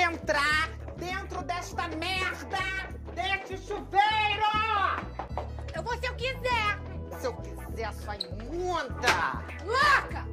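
No audible technical faults occur anywhere in this audio.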